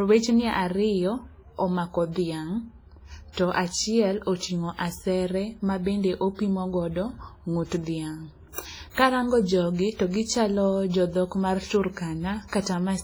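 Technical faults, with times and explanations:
Throughout, WMA compression: the speech sounds ringing and washy, with a hiss that swells and fades with the signal. This is likely a transform codec at a low bitrate, around 24 kbps, where long blocks smear quantisation noise and weak spectral detail is zeroed.
3.33–3.37 s, 7.66–7.72 s, 12.48–12.52 s and 12.62–12.66 s, pre-echo: a brief hiss of about 40 to 60 ms precedes each sharp attack, softening it. Noise sized for the loud onset is spread across the whole block, filling the quiet moment before it.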